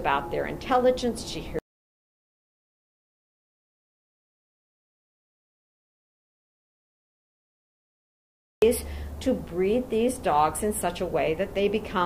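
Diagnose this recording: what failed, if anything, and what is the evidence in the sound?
At 1.59 s the sound cuts off abruptly into silence, with no room tone, and resumes mid-flow at 8.62 s, about 7.0 s of material gone. This audio dropout to silence most likely comes from the input device or link failing while the recorder kept writing silence.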